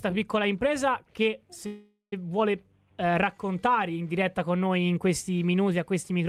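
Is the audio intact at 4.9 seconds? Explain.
Yes, the audio is intact at 4.9 seconds, with no fault present at that moment.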